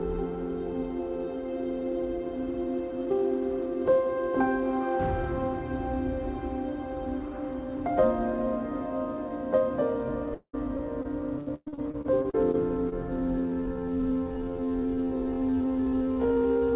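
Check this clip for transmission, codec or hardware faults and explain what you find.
Two faults stand out, both in the second half of the clip, heard through a narrowband call path that leaves nothing above 4 kHz, which fits a G.711 A-law link.

From 10.34 to 12.93 s there is repeated packet loss, giving a robotic sound. The receiver kept running out of audio data and patched each hole by extending the last sound it had. That happened about a dozen times in quick succession, the longest gap near 0.19 s, with roughly a quarter of that stretch made of concealment. The result is choppy, robotic audio with fragments missing.

From 13.36 s to the end, the audio runs at half speed with its pitch unchanged. This is a time-stretched section, likely caused by software padding the audio to fill a target length by repeating short slices rather than resampling. The pace drops abruptly while the pitch holds, so the sound drags.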